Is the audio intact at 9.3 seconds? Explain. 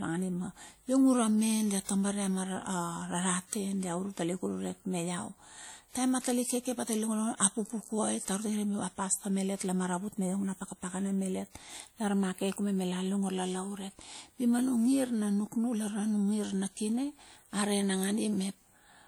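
No. At 9.3 s the speech carries plainly audible WMA compression, present throughout. Long transform blocks smear quantisation noise, giving ringing, washy hiss, likely from a low bitrate around 48 kbps.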